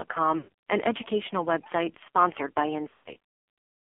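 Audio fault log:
throughout AMR narrowband mobile codec: the speech sounds thin, buzzy and synthetic, with nothing above 4 kHz and the band closer to 300 Hz to 3.4 kHz. The heavy damage fits a low AMR-NB rate of about 5.9 kbps, where a vocal tract model driven by sparse pulses replaces the real waveform.
0.38 to 0.49 s lost AMR speech frames: the voice smears into a drawn-out, warbling hold that sinks toward silence, then returns weak and rough. About 140 ms of frames failed, so the decoder kept repeating the last good pitch and filter with falling gain.
2.90 to 3.22 s lost AMR speech frames: the speech turns choppy and stuttering, with repeated brief warbles and dips. Losses are scattered across roughly 0.8 s, with the longest run 120 ms, so each gap is patched by a fading copy of the last good frame.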